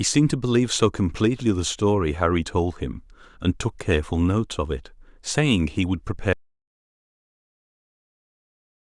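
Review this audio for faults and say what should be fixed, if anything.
At 6.33 s the speech cuts off abruptly in mid-flow, and an audio dropout to silence runs through to the end of the clip. The gap is silent with no room tone or hiss, which sets it apart from a noise gate or a fade, where the level eases down or some background remains. The likely cause is a lost input, such as a disconnected device, a failed link or a stray mute, while the recording carried on writing silence. Whatever followed is gone, so that section needs re-recording. Securing cables and mute controls, and watching the input meters during capture, would prevent it.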